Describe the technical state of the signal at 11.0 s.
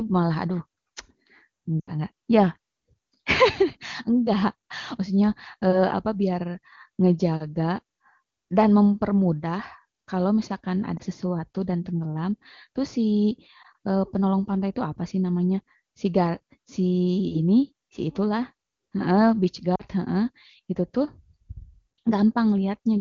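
A lost AMR speech frame at 10.97 to 11.02 s: the decoder bridges the gap by repeating its last good pitch and vocal tract settings at reduced gain, producing a brief dip or warble consistent with a single 20 ms frame.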